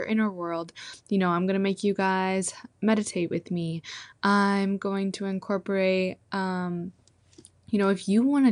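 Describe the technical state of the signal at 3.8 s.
At 3.8 s the speech carries damage that runs through the whole clip, likely from MP2 compression. The encoder splits the signal into 32 sub-bands and, starved of bits, switches upper bands off and coarsely quantises the rest, which fits a rate of about 80 kbps. The result is clearly audible: the speech sounds dull, with bands flickering in and out and a gurgling, granular distortion over it.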